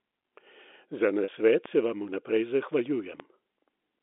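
A speech recording carried over a G.711 telephone line, so the band is limited to roughly 250 Hz to 3.6 kHz. From 1.24 to 1.28 s there is packet loss with pitch repetition. About 40 ms of audio went missing, which fits two 20 ms packets. The receiver repeated the last pitch period to fill the gap, so the sound briefly holds with a buzzy, slightly frozen quality. There are also two DC steps, at 1.66 s and 3.20 s. At each one the waveform's zero line suddenly jumps, which is heard as a low thump. The offset then drains away through a 20 Hz high-pass filter, while the speech itself carries on unchanged.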